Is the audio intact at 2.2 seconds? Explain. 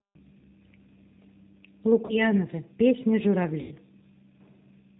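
No. Around 2.06 to 2.20 s the sound smears into a fading buzzy tone or coloured noise and stays weak just after. This is VoIP packet loss concealed by the speech codec: about 30 ms of packets went missing, which fits three lost 10 ms frames, and the decoder extended its last pitch and filter at falling gain. Throughout, including this moment, a rough, synthetic, band-limited quality with nothing above 4 kHz points to the G.729 codec running at 8 kbit/s.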